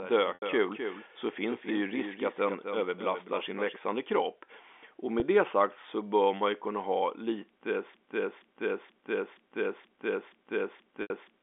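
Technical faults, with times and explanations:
0.00–3.76 s, doubled audio track: A fainter copy of the sound trails the original by about a third of a second, around 10 dB quieter. It is full-band and dry, with no decay or room colour, so it sounds like a second feed rather than an echo. The copy is already present at the start and cuts off abruptly at 3.76 s. This is likely the same signal captured twice, once through a slower path.
0.34–0.42 s, 5.20–5.22 s and 11.02–11.10 s, packet loss with pitch repetition: After "här är" at 0.34 s, and again after "man ju kunna ha" at 11.02 s, 80 ms of audio is replaced by a held, buzzy tone that fades out before the sound resumes. That length fits four lost 20 ms packets. Just before "det sagt så bör" at 5.20 s, a 20 ms gap, which fits a single lost packet, gives only a brief buzzy hold. In each case the receiver filled the gap by repeating the last pitch period.
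7.94 s to the end, broken-record loop: From 7.94 s the same fragment of about 0.48 s repeats back to back seven times, with no variation, until the clip ends. Whatever should have played in those last 3.5 seconds is missing. This is likely a stall in the player, encoder or stream that kept sending the last fragment it held. The narrow telephone band, roughly 250 Hz to 3.5 kHz, remains audible through all of these faults.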